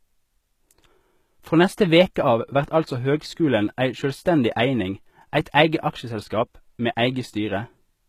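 From start to finish the speech carries plainly audible HE-AAC compression damage, likely from a very low bitrate stream, around 20 kbps by the sound of it. The treble is still bright, but it is rebuilt rather than real: copied-up lower bands shaped by a coarse envelope, so s sounds come out gritty and lispy. Nothing sits above 14.9 kHz. That synthetic brightness, rather than a dull cut-off, separates it from ordinary low-pass filtering.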